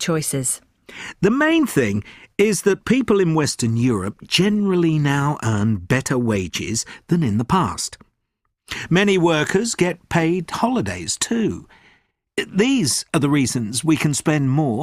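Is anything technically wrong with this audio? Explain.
Yes. At about 1.96 to 1.98 s there is a short, sharp glitch, a fairly loud burst peaking somewhere around -15 dBFS that doesn't belong to the surrounding sound. This is a corrupt frame decoded: bit errors damaged the compressed data for a couple of consecutive frames, and the decoder played them anyway. The misread gains and codes put energy in the wrong frequency regions for the roughly 26 ms those frames last.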